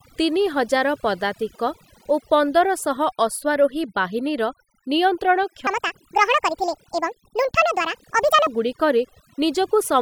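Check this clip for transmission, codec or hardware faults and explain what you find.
Two faults stand out in this speech clip: heavy-handed noise reduction across the whole recording, and one passage running too fast.

Overdone noise removal, throughout: bands near the estimated noise floor are cut away, leaving near-silent gaps with twinkling specks, unlike plain low-bitrate smearing.

Section at the wrong speed, 5.67 to 8.47 s: the audio plays 1.68 times too fast, likely from resampling against the wrong clock. Pitch rises about ten semitones together with the hurried pace, which separates it from pitch-shifting alone.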